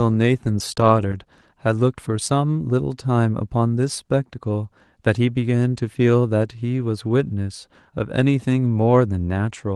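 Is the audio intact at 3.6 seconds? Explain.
Yes, the speech at 3.6 seconds is intact, with no dropout, click or other fault at that moment.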